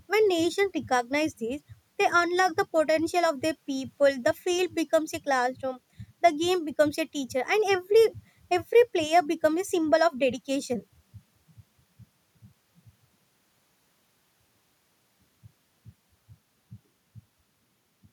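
No technical faults can be heard anywhere in the speech recording, and the signal holds steady throughout.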